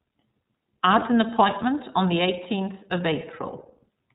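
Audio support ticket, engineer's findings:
iLBC codec throughout: narrowband, rough, slightly synthetic speech. Spectrogram shows nothing above 4 kHz. The independently coded excitation and plainly audible coarseness fit the 13.33 kbps, 30 ms frame mode.

Lost iLBC frames, 0.99 to 1.03 s, just before "an appointment on the": a brief held, buzzy vowel where the decoder repeated the last pitch cycle with noise. On the spectrogram it appears as a flat harmonic smear. The 30 ms gap points to one lost frame, and the voice is right again immediately.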